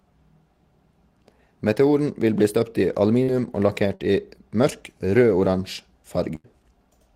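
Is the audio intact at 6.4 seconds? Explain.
No. A burst of packet loss spans 6.35 to 6.47 s; the receiver stretches the last sound for about 85 ms, fading it, then resumes with a section missing.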